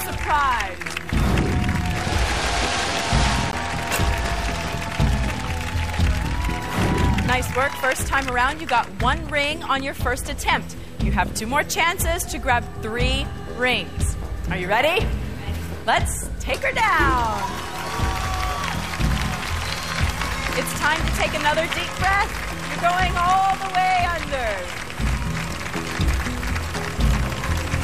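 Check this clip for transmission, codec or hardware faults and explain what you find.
There's one fault in here, a CD skip at 3.52 s. Something, whether a knock to the player or a flaw on the disc, threw the laser off its track and onto another turn of the spiral. The player went silent for a very short moment, roughly 15 ms, then picked up from the new spot. You hear it as a small tick followed by an abrupt jump in the audio, where the continuity just breaks.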